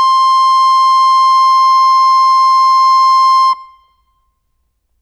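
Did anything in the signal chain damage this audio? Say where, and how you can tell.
No, no damage is audible.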